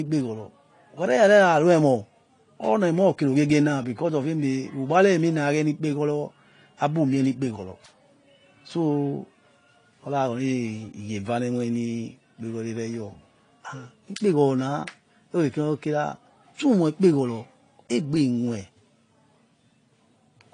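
Transcoding between lossy codecs runs throughout: nothing above 10.2 kHz survives, and layered artefacts point to low-bitrate MP3 likely re-encoded as AAC-LC.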